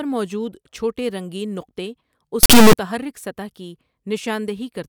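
From 2.43 to 2.73 s the speech shows an integer read as float fault: samples stored as integers were interpreted as floating-point values, which points to 32-bit integer data being decoded as 32-bit float. The resulting numbers are either tiny or enormous, so the output slams between silence and the clipping limit. For those 0.3 s the speech is replaced by a harsh, extremely loud buzzing square wave that drops out wherever the signal is very quiet.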